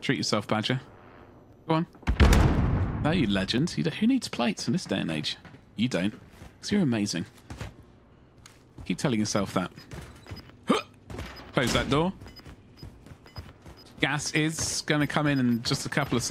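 From 0.50 s to 15.86 s there's a tick every 1.02 s, about fifteen in all. That's periodic USB or driver dropouts: something stalls the bus or driver on a schedule, and a sliver of audio, around half a millisecond, gets skipped outright, leaving a tiny click.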